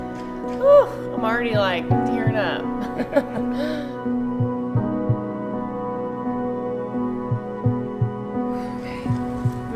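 No technical faults can be heard anywhere in this audio.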